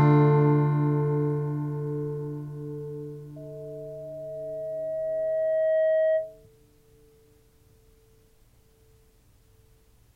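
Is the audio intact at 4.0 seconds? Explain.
No. At 4.0 s a loudspeaker feedback squeal is underway, from 3.36 to 6.47 s: a microphone re-amplifies its own loudspeaker until a 636 Hz tone runs away, swelling over about two seconds to roughly 5 dB above the sound. That gradual build separates it from a steady hum.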